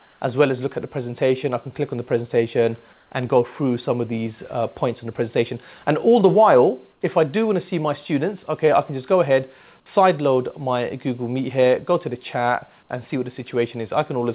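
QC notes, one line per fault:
0.0–0.2 s, 2.93–3.11 s, 6.92–7.01 s: comfort noise in place of the background. Detailed background becomes steady featureless hiss, about 2–7 dB quieter, likely from discontinuous transmission. On the spectrogram these stretches show as smooth, even texture; on the waveform, as a slight level dip.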